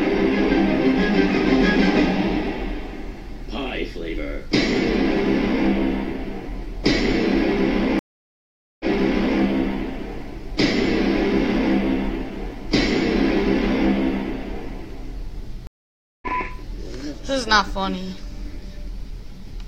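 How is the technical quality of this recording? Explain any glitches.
The recording has two stream reconnects. Each time the connection dropped, and the player went silent, reconnected, and restarted decoding mid-stream. At 7.99 to 9.4 s, about 0.81 s of silence precedes a restart 0.6 s earlier, so audio repeats. At 15.67 to 16.27 s, 0.55 s of silence is followed by a jump of roughly 0.4 s forward, so audio is skipped.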